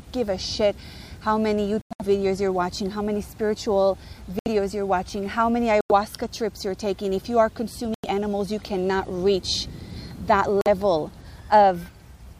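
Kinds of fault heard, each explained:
Corrupt frame muted: Damaged compressed frames were rejected by the decoder and replaced with silence. Five abrupt holes appear, from about 70 ms to 0.2 s long, the longest at 1.81 s. The gap lengths fit frames of roughly 25 ms. Timing stays intact.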